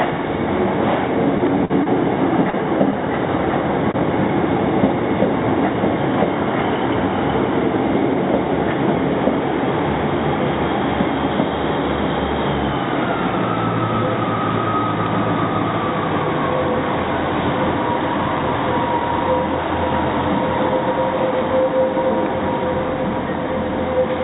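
Heard through a narrowband call path, with nothing above 4 kHz in a way that fits G.711 mu-law, the audio has four short stalls from late packets at 1.65–1.72, 1.84–1.88, 2.50–2.55 and 3.92–3.96 s. Each time the jitter buffer ran dry, so the last sound gets held for 46, 23, 34 and 22 ms before playback picks up where it left off, with nothing actually lost.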